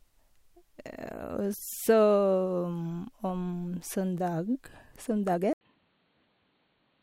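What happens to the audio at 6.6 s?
At 6.6 s the speech sits in a stretch running from 5.53 s to the end, after an 80 ms silence, where it turns dull and boxy with nothing above 4.4 kHz. The likely cause is the input switching to a poorer device. On a spectrogram the upper energy cuts off abruptly at that boundary and a faint new noise floor appears; the waveform shows the brief flat gap but little change in level.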